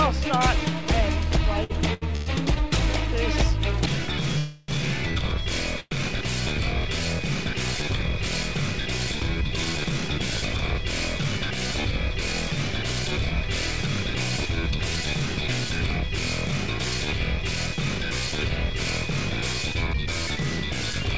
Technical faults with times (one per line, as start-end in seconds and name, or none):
1.64-2.58 repeated stalls (stutter)
4.38-4.70 call audio freeze
5.80-5.93 call audio freeze